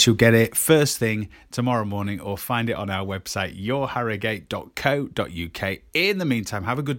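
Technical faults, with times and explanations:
Nothing technical goes wrong anywhere in this speech clip, so there's no fault to list.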